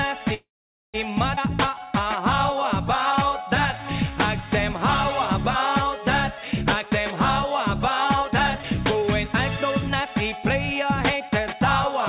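Right at 0.34 s the audio stalls: the last bit of sound carries on briefly as a fading fill, then drops to near silence for roughly half a second before picking up again at 0.96 s. That's the call audio freeze pattern, likely caused by packets getting held up in transit until the jitter buffer ran dry. The receiver papered over the wait with about 0.6 s of fill, so a gap was inserted but nothing appears to be lost.

Shortly after, at 1.36 to 1.39 s, there's a skip ahead. Playback jumps forward with only about 11 ms of join, and around a fifth of a second of material just isn't there. It fits the buffer, having backed up after that stall, dropping a chunk to get rid of the extra delay, so the two sides butt almost directly together.

Then come two jitter buffer slow-downs, from 1.69 to 2.23 s at 91% speed and from 3.17 to 4.79 s at 92%. The pitch holds but the sound drags, with things slightly stretched out. 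The receiver was repeating single pitch periods to rebuild its reserve, adding 56 ms in the first stretch and 141 ms in the second.

The back half goes the other way with three jitter buffer speed-ups: 6.78 to 7.68 s at 110%, 8.09 to 9.60 s at 122%, and 10.00 to 11.61 s at 107%. Pitch stays put but the sound hurries along, most obviously in the middle one. Here the buffer was holding more than it wanted, so it trimmed short pitch-period slices over and over, shaving off roughly 0.1 s, 0.3 s and 0.15 s respectively.

All of it sits on a call path with nothing above 4 kHz, which fits a 64 kbps narrowband call codec.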